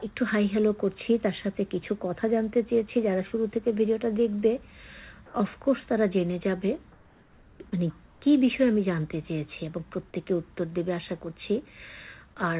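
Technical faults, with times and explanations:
5.26–5.34 s, 6.92–7.60 s, 8.06–8.22 s, comfort noise in place of the background: the sender likely stopped transmitting in pauses, so the receiver filled them with steady, featureless synthetic noise, about 4 dB louder in the first gap and about 2–3 dB quieter in the others.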